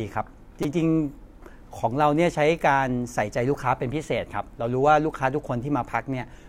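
At 0.63 s a brief buzzy click cuts into the speech, and at 3.61 s a shorter one follows. Both are a repeated buffer. New audio did not reach the playback device in time, so it replayed the last 5 ms block instead. At 0.63 s the block sounds four extra times, and at 3.61 s it sounds twice more. The hard joins between such tiny repeats make a buzz rather than a stutter, and no speech appears to go missing.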